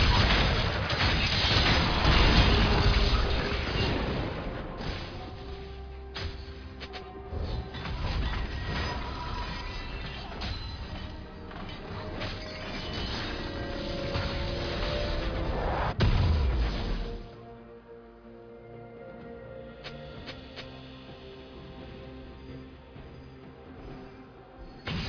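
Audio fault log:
No faults are heard anywhere in this audio. There is nothing to log against any point in the clip.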